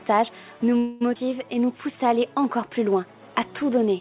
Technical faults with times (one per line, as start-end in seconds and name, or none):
0.78-1.03 call audio freeze
1.15-1.17 skip ahead
1.18-2.10 jitter buffer slow-down